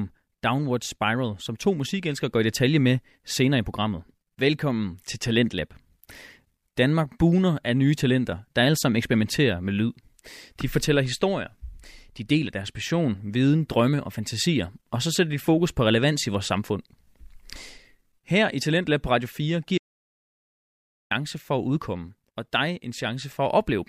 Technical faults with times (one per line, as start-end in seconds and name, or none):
19.78-21.11 audio dropout to silence